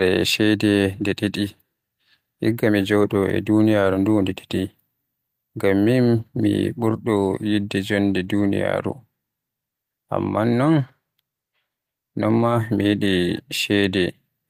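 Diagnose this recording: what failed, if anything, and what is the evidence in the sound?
The network stage lost two packets, rebuilt from error correction: just after "mi ɓurɗo yidde jonde", 8.23 to 8.29 s sounds briefly rougher and noisier but never drops out, which fits about 40 ms of Opus low-bitrate backup copies. Plain concealment would instead sound smeared or buzzy.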